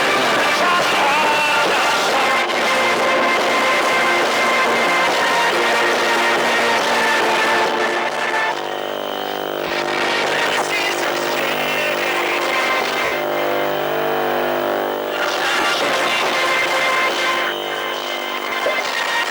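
Lost LE Audio frames cause four short dropouts, at 9.67, 13.05, 15.60 and 18.49 s. They last about 30, 70, 40 and 30 ms, which fits runs of 10 ms frames going missing over the link. The LC3 decoder fills each gap by reusing the last good spectrum with scrambled signs. So the sound briefly turns into a hissy smear. The 70 ms gap at 13.05 s is longest, and it fades as the concealment runs on.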